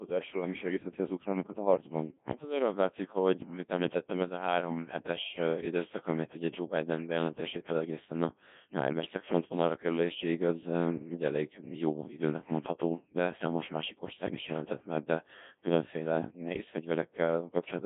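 Throughout, the speech is robotic and buzzy, with nothing above 3.6 kHz. The Codec 2 vocoder rebuilds it from sine waves, which fits a 1.6 kbit/s mode.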